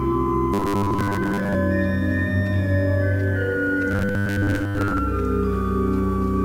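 Two stretches of robotic sound from repeated short buffers show up here, from 0.54 to 1.58 s and again from 3.91 to 4.98 s. In both, the audio collapses into a stiff, metallic buzz locked at 100 Hz, which fits a tiny chunk of about 10 ms being looped over and over. Most of the real signal in those windows is simply skipped. The likely cause is new data arriving too slowly, with the player padding the gaps by replaying its last buffer.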